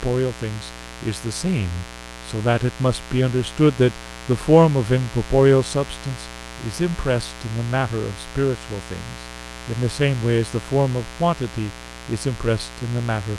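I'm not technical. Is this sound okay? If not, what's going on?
No, not quite. Running under the speech for the whole clip there's a steady, raspy mains buzz, and it's fairly loud, not far below the talking. It comes from the electrical supply leaking into the recording, probably through something like a light dimmer, a power adapter or a poorly shielded cable. It's tied to 60 Hz power, and the sharp spikes it makes stack up into that gritty, edgy hum rather than a smooth low tone.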